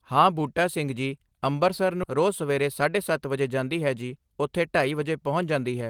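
A speech clip with a skip ahead at 2.03 s: roughly 0.7 s of audio is missing and the two sides join with no gap, unlike a dropout, which leaves silence. From 2.17 to 5.64 s a jitter buffer speed-up plays the speech about 7% faster by trimming short pitch-period pieces, about 0.3 s in total, so the pace hurries while the pitch stays unchanged.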